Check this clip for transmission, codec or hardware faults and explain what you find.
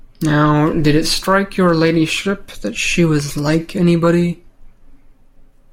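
One fault is present across the whole speech clip. A block size mismatch (truncated) runs from start to finish: one stage writes longer blocks than the next consumes, so each block's tail is discarded. This produces a steady buzz at 46.9 Hz, which fits 1024-sample blocks, while pace stays normal.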